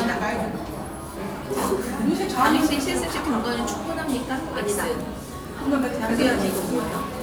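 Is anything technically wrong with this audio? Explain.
No, the recording comes through as an intact, continuous signal with nothing technically amiss anywhere in it.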